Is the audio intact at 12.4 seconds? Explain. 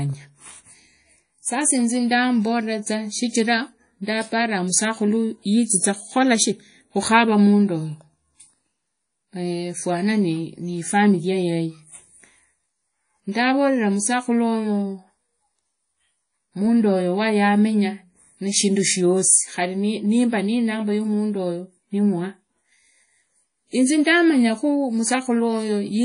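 No. At 12.4 s, as across the whole speech clip, WMA compression damage is plainly audible, likely from an encode around 32 kbps. Long transform blocks smear quantisation noise into a washy, ringing hiss that breathes with the voice, and nothing remains above 10.1 kHz.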